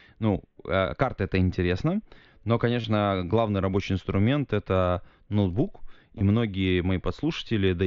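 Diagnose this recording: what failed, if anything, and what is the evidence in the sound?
Concealed Bluetooth headset packet loss on the wireless link between headset and phone, over the mSBC codec. At 2.81 to 2.84 s (about 30 ms) and 6.18 to 6.21 s (about 22 ms), the receiver patched the gaps by repeating recent waveform, giving a brief buzzy held tone and a slight warble as real speech resumes.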